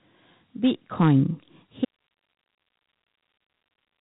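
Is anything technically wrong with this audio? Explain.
Yes, there are two faults.

Throughout the clip, the speech carries Dialogic VOX ADPCM coding damage, and it is plainly audible. This codec stores each sample as a 4-bit difference from a predicted value, and the 32 kbps rate fits 8,000 samples a second. The quantiser's coarse steps leave a gritty hiss that rides along with the speech. Nothing is present above 3.9 kHz, so the sound is narrow and phone-like, with no air or sibilant detail.

From 1.85 s to the end, there is an audio dropout to a faint residue. The speech cuts off abruptly rather than fading or pausing, and the rest of the clip holds only hiss, around 55 dB below the speech level. The likely cause is that the wanted signal was lost while the path after the break stayed live, so the remaining noise passed through with no program on it.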